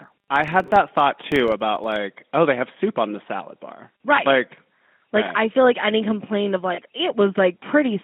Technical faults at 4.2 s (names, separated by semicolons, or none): GSM full-rate codec; lost GSM frames